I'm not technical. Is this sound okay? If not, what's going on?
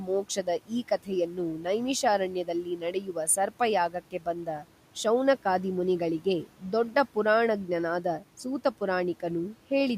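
No. In the first few seconds, parts of the speech are turned down: from 0.0 to 0.72 s, around 1.0–1.1 s, 1.3–1.4 s, 1.6 s, 2.3–3.3 s and 3.9–4.7 s. This is speech cut by the noise suppressor, which mistakes quiet sounds and word endings for background hiss and lowers them, leaving them faint or swallowed. Unlike a dropout, the sound never stops completely. The faint room noise underneath is part of the recording.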